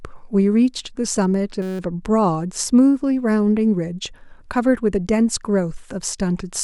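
From 1.62 to 1.79 s a steady 188 Hz buzz interrupts the speech. This is a system hang loop: a frozen system replayed one 5.33 ms slice, which fits a 256-sample buffer.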